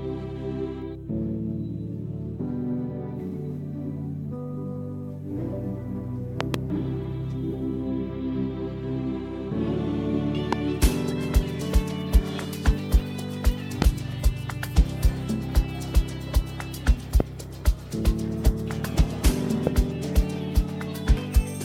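Loud pops appear five times. The first, from 6.41 to 6.56 s, is a double pop in quick succession. Single pops follow at 10.53 to 10.55 s, 13.82 to 13.84 s, 17.20 to 17.22 s and 19.67 to 19.69 s. Each is a sharp, brief thump that peaks some 20 dB above the sound. The sound carries on underneath. A likely cause is a sudden voltage pulse, from static or a switching glitch, entering the signal path.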